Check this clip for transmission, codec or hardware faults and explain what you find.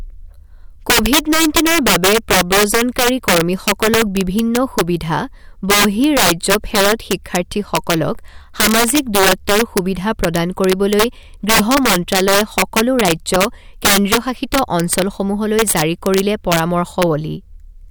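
One fault runs through this speech clip. Integer overflow, present throughout: with the signal pushed about 11 dB past full scale, the loudest peaks, a small share of samples, exceed the largest integer and wrap to the opposite sign instead of being limited, producing violent cracks far harsher than clipping.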